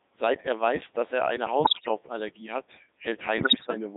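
Codec 2 vocoder artefacts run through the whole speech clip: the voice is rebuilt from sine waves, so it sounds robotic and buzzy, confined to roughly 150 Hz to 3.7 kHz, and the heavy damage fits the 3.2 kbit/s mode. Bit errors on digital voice radio strike from 1.64 to 1.88 s, right after "weiß dass er eine", and again from 3.38 to 3.74 s. Corrupted bits, around one in ten and then somewhat fewer, scramble the pitch, level and spectral parameters of each frame, so the synthetic voice lurches and breaks into warbling gibberish.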